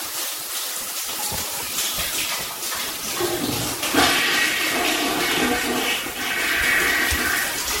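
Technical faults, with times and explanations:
Throughout, generation loss: a swirly, hollow, smeared sound with blurred attacks and nothing above 16.5 kHz, likely from about five MP3 re-encodes at what suggests 64 kbit/s. A single pass at that rate wouldn't pile up this much noise and spectral holes.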